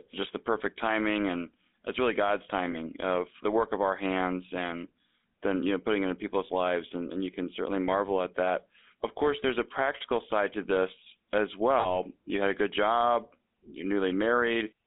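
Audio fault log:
throughout: GSM full-rate codec. The speech has a buzzy, gravelly roughness that is plainly audible. The codec rebuilds the voice from a vocal-tract model driven by sparse, evenly spaced pulses, so fine detail in the excitation is lost and the voice sounds coarse. The band runs only from about 250 Hz to 3.6 kHz, so the sound is thin and muffled at both ends. This fits the 13 kbps full-rate codec.
2.72–2.75 s and 11.8–11.95 s: lost GSM frames. At each point the speech briefly turns into a rough, metallic ring. The decoder is repeating the last good frame's settings in place of the missing data. The first gap is very short, which points to one lost frame. The second disturbance lasts about 0.15 s, which points to a couple of lost frames. Neither gap is long enough to fade fully to silence.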